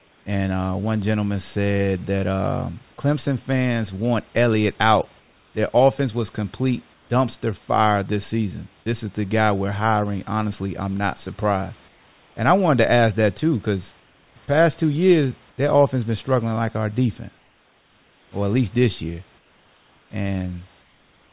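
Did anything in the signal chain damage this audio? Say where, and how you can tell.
Yes, at the call-processing stage. In the pauses, the room background, which sits about 35 to 37 dB below the loudest speech, turns into a flat, featureless hiss, about 3 to 4 dB quieter where it can be measured. This happens at 0.0–0.26 s, 5.2–5.54 s, 6.94–7.1 s, 11.88–12.36 s, 14.0–15.58 s, and from 17.38 s to the end. The cause is likely comfort noise in place of the background: discontinuous transmission stops sending audio during silence, and the receiver synthesises a noise roughly matched to the background's level and spectrum instead.

At 14.46 s, inside the 14.0–15.58 s stretch, a sliver of speech is cut off. About 10 ms of real sound vanishes, and roughly 20 ms of the same steady synthetic noise takes its place before speech returns. This is sound dropped by the voice detector, likely because the sender's detector judged that bit of speech to be background and briefly stopped sending, leaving the receiver to fill the gap. 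The whole clip comes through a G.711 call path with nothing above 4 kHz.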